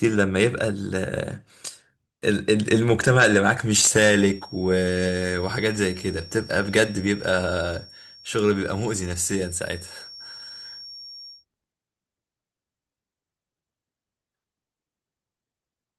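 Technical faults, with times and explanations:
3.90 to 11.45 s, feedback whistle: a thin, steady tone at 5.5 kHz sits behind the speech for about seven and a half seconds, roughly 20 dB below it, swelling and fading slowly in level without growing. This is likely a loudspeaker-to-microphone loop held right at the edge of feedback, so the 5.5 kHz component keeps recirculating through the room and system but never gains enough to run away into a howl.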